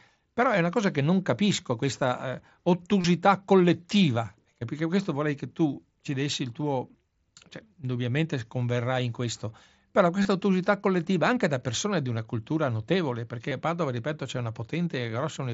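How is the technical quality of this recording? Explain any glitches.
The recording is speech carried over a Bluetooth headset link, and it has three brief glitches where the sound turns into a short, buzzy held tone before normal audio resumes with a small warble.

The first is at 3.01 to 3.04 s, about 30 ms long. The second runs from 10.23 to 10.25 s, about 23 ms, between "converrai in questo però" and "ottusità collettiva anche da". The third is at 13.49 to 13.51 s, also about 23 ms, just after "di una cultura notevole". All three are concealed Bluetooth headset packet loss. When voice packets between headset and phone went missing, the receiver filled each gap by repeating the closest-matching stretch of the most recent waveform, which produces that brief tonal buzz at full level. The lengths point to runs of three or four lost packets rather than isolated drops, which is why the fill is audible instead of hidden.

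The link itself is the wideband mSBC headset codec. The audio is bandwidth-limited to about 8 kHz, and there is a light graininess on louder passages, consistent with a roughly 60 kbps stream.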